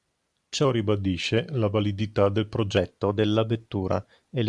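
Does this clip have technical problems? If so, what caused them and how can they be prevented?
Yes. From 0.65 to 2.77 s the speech has a wrong sample rate fault: it drops about 1.5 semitones in pitch and slows to 0.919 of normal speed, which fits 24 kHz audio played back at 22 kHz with no conversion. Pitch and tempo sag together by the same ratio. On a spectrogram, harmonics and formants in that stretch sit about 8% lower, and the segment is drawn out in time. The waveform's periods are visibly longer. To prevent this, carry the true sample rate with the audio and resample to the output device's rate instead of passing the samples through unchanged.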